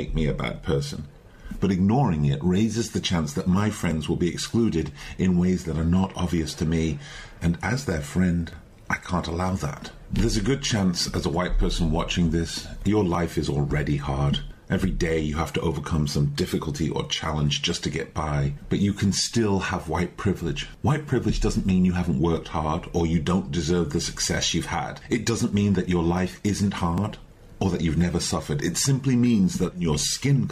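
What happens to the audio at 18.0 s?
18.0 s falls inside a run of clock drift buffer slips lasting from 3.91 s to 26.98 s. A regular click or pop recurs every 4.61 s while the signal plays. The likely cause is two devices on independent clocks disagreeing by several hundred parts per million, so a buffer creeps until a block of roughly a hundred-odd samples is dropped or repeated. On a waveform each slip shows as a small discontinuity. A spectrogram shows evenly spaced thin vertical broadband lines.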